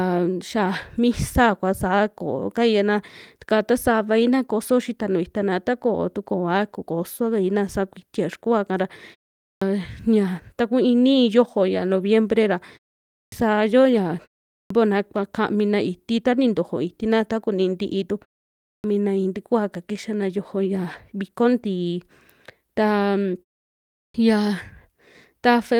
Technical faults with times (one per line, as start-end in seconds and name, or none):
9.44-9.62 clipped start after a pause
13.12-13.32 clipped start after a pause
14.53-14.70 clipped start after a pause
18.66-18.84 clipped start after a pause
23.97-24.14 clipped start after a pause